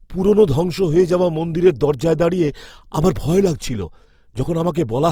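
Throughout, the speech sounds rough, grainy and noisy, likely from Opus compression in CELT mode filling starved bands with noise, fitting about 24 kbps.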